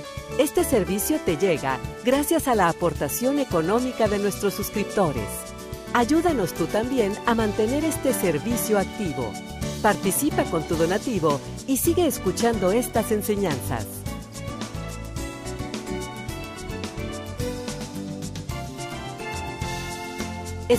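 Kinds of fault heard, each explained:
No technical faults can be heard anywhere in the audio. Nothing stands out that would call for a fault explanation.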